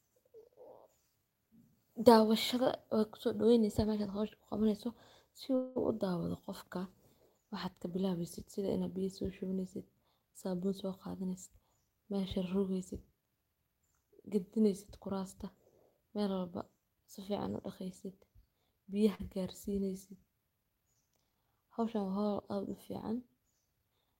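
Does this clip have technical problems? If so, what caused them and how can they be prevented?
Yes. Four network-related faults can be heard in this speech.

From 5.55 to 5.88 s there is a call audio freeze. The last sound is drawn out as a fading buzz for about 0.2 s before the speech resumes where it stopped, so nothing is lost but everything after runs about 0.2 s later. The likely cause is packets held up in transit until the jitter buffer emptied. On a spectrogram the harmonics go flat and smeared, then fade. In the waveform, a repeating, decaying pattern replaces normal speech movement. A larger adaptive jitter buffer, or a better route to the other party, would prevent this.

From 10.55 to 12.20 s a jitter buffer speed-up makes the speech run at about 109% speed with unchanged pitch, so it sounds slightly hurried. To shed excess buffered delay, the receiver cut out short pitch-period slices many times, roughly 150 ms in total. 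A spectrogram shows syllables packed closer together while harmonic spacing stays the same, and the waveform shows tiny splices at period boundaries. Steadier packet delivery keeps the buffer near its target so it doesn't need to catch up.

Right after, from 12.21 to 12.25 s, a short stall from a late packet holds the current sound too long. The receiver stretched it by about 21 ms until the packet arrived, then carried on with nothing missing. This produces a faint buzz or dip. A spectrogram shows a brief frozen, horizontal stretch of the harmonics, and the waveform a few near-identical repeated cycles. Slightly more jitter-buffer headroom would absorb such a late packet.

From 19.15 to 19.21 s a short concealed packet loss replaces about 40 ms of real audio with around 44 ms of synthesized continuation. The continuation is extrapolated from the previous pitch, or shaped noise, then crossfaded back in. 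It is heard as a brief smear or wobble, possibly swallowing a consonant. A spectrogram shows a short blurred patch where onsets or fricative texture should be, and the waveform a smoothed, overly regular segment. Forward error correction or redundant packets would let the receiver recover the lost audio instead of guessing.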